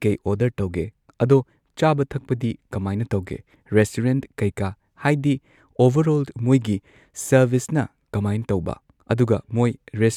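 Nothing in this speech recording stands out as a technical fault, so there's nothing to flag here.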